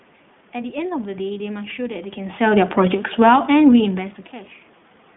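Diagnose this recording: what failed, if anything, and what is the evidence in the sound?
The whole clip has passed through the iLBC codec, a stage that belongs to the network voice path. The band runs only from about 150 Hz to 3.5 kHz, and the speech has a plainly audible rough, slightly synthetic grain. That texture separates it from a simple telephone band-limit, which would be dull but clean. Its character fits iLBC's 20 ms frames at the 15.2 kbps mode, each frame coded on its own.

At 1.34 s one iLBC frame was lost in transit, leaving a 20 ms hole. The decoder filled it by repeating the last pitch cycle blended with noise, so the moment comes out as a brief held, faintly buzzy vowel rather than silence. That concealment sound rules out a plain dropout or a buffer underrun, which would click or go silent. Clean speech returns immediately afterward, as expected from a codec whose frames don't depend on each other.

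From 3.06 s to 3.6 s automatic gain control in the call processing chain lowers the level by about 3 dB. The AGC judged the input too hot or its background noise too strong and eased its gain down gradually. The room noise underneath sinks together with the speech, which marks this as a processing gain change. The level shifts around 2 s and 4 s sound like the talker moving relative to the microphone, where the background stays put.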